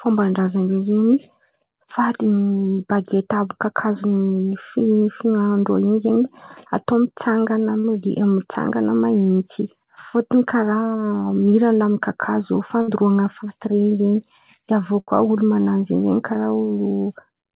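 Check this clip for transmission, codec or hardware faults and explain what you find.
Packet loss occurs at five points in this speech, carried over what sounds like a narrowband call codec, consistent with G.711 mu-law at 64 kbps, with nothing above 4 kHz.

Short concealed packet loss at 5.00–5.04 s, 7.80–7.86 s and 16.34–16.37 s: about 20, 40 and 20 ms arrived too late. The decoder extended the preceding sound, leaving a brief smear or wobble.

A burst of packet loss at 12.82–12.90 s and 15.00–15.10 s: about 60 and 80 ms went missing. The extended sound fades into a held buzz or hiss before speech resumes further on.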